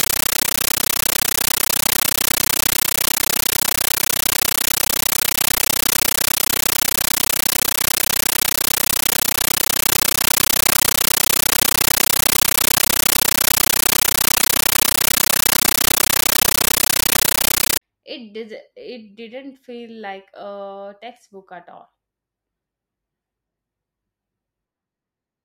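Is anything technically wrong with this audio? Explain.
Yes. From the start to about 17.8 s the sound is a compressed stream played as audio. The receiving end took the encoded bitstream, whose pattern fits AC-3, as ordinary samples instead of decoding it, so each coded frame emerges as a 13.3 ms burst of noise followed by silence, repeating 31.25 times a second. This is loud, chattering static. Its strict, even rhythm with silent gaps separates it from random crackle or interference noise.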